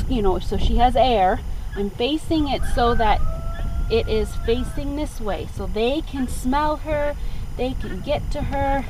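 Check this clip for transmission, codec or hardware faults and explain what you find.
There is one fault, timecode bleed, and it runs through the whole clip. A steady chirping warble sits behind the sound from start to finish. It is faint, roughly 35 dB below the main signal. Linear timecode from a nearby track or cable is leaking into the audio path. The code is a square wave that flips between two pitches, around 1 and 2 kHz. It runs at 25 frames per second.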